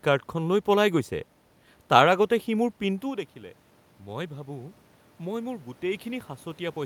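It's a speech clip, and the thing to listen for is automatic gain rising from 3.0 s through to the end at 6.85 s. Around 3 s the talker drops back from the mic, so the level falls by about 15 dB. The AGC hears that as too quiet and slowly turns itself up, and you can hear the voice and the room noise swelling together over those last few seconds rather than the voice recovering on its own.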